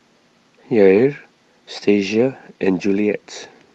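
Speech with a brief rough, noisier patch from 0.97 to 0.99 s, with no gap. It is a lost packet rebuilt from error correction: the 20 ms of damage fits a single lost packet, replaced by the coarser backup copy carried in the next one. The Opus call audio is band-limited to about 12 kHz.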